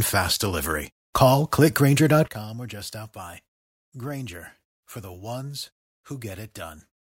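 A sudden gain jump at 2.28 s drops the speech and background noise together by about 15 dB until the end, likely from a gain change applied without a ramp.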